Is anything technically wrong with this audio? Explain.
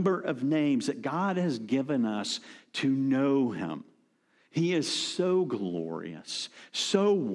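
No, nothing technically wrong is audible in this speech recording.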